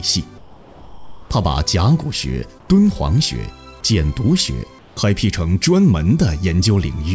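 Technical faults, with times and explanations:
0.38–1.30 s, 2.60–2.68 s and 4.79–4.97 s, comfort noise in place of the background: in each pause the real background, sitting about 26 to 30 dB below the loud parts, gives way to a steady, featureless hiss that is about 7, 2 and 4 dB quieter respectively. The pause is filled with noise rather than silence, which sets it apart from a dropout or noise gate. The likely cause is discontinuous transmission with synthesized noise at the receiver, heard over a call path with nothing above 8 kHz.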